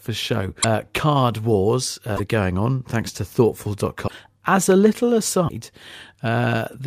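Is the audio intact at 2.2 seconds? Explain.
No. Right after "card wars", from about 2.16 to 2.20 s, the audio jumps ahead and comes out as a chirp, a burst of noise or a short hole before it settles on "are going on thanks." The likely cause is a broken MP3 bit reservoir. MP3 frames stash part of their data in earlier frames, so when frames go missing, the next one reaches back and decodes another frame's bytes. The damage spans under two frames, which fits frames of about 26 ms.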